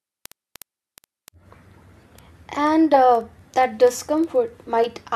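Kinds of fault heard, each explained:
Word clock ticks: an unlocked receiving clock slips one sample about every 70 ms throughout, giving evenly spaced thin vertical lines on a spectrogram.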